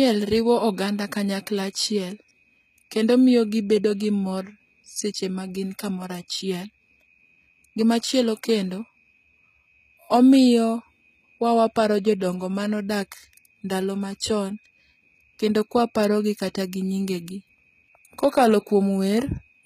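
HE-AAC compression runs throughout the speech, with plainly audible codec damage and nothing above 14.9 kHz. The treble is likely rebuilt by spectral band replication from copied lower bands, which fits a bitrate near 20 kbps, so s sounds come out gritty and lispy.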